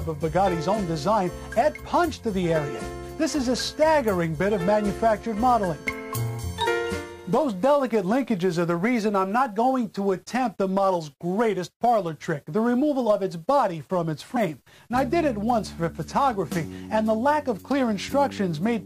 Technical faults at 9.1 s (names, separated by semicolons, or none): none